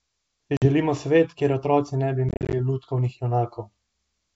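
At 0.57 to 0.67 s the speech drops out in packet loss on an ADPCM call, losing about 50 ms, roughly five packets, as hard-edged silence. On a spectrogram it is a sharp vertical gap; the waveform flatlines. Resuming, the decoder's adaptive predictor and step size no longer match the sender's, so speech returns with brief distortion before settling. From 2.29 to 2.54 s about 150 ms is lost, scattered over 240 ms in runs up to 40 ms, leaving a comb of gaps.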